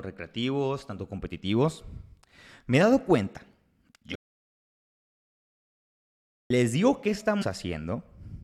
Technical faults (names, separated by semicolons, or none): audio dropout to silence; damaged data in a compressed stream